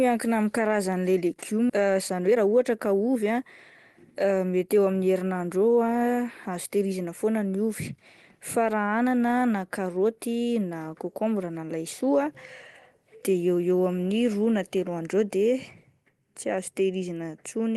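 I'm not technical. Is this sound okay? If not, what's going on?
No, there are a couple of glitches. At about 1.69 s there's a skip ahead: roughly a second of speech just vanishes and the talking jumps straight on with no gap, so a bit of what was said is simply lost.

Right after that, there's a jitter buffer speed-up from 1.79 to 3.45 s, with speech running about 12% fast, and again from 4.24 to 5.0 s at about 9% fast. The call system had built up a backlog of audio and trimmed tiny slivers to catch up, so the voice sounds hurried but not higher-pitched.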